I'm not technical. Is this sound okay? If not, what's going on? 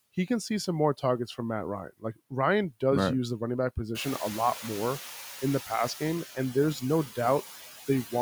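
No. All the way through, the background noise keeps dipping and swelling. These are noise suppressor artifacts: a filter keeps turning down whatever it judges to be steady noise, moment by moment, and those constant adjustments make the noise sink between words and rise under them.

Between about 1.9 and 2.3 seconds, just before "does right use the", part of the speech goes faint and seems swallowed for a brief moment. This is speech cut by the noise suppressor: the filter mistook some quiet speech sounds for background noise and turned them down too. The room noise that becomes louder around 4 seconds is real background sound in the room, not a fault.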